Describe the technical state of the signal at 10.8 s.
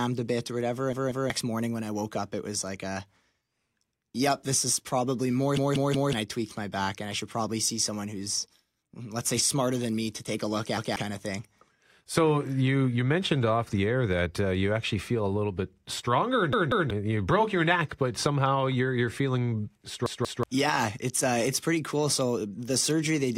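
At 10.77 s, just after "to take a look", the speech hits a repeated buffer lasting until 10.96 s. New audio arrived late, so the last 186 ms chunk played once more. That size fits an 8192-sample buffer. The repeat sounds as a stutter with a hard join before "kind of thing", and about 200 ms of audio is lost.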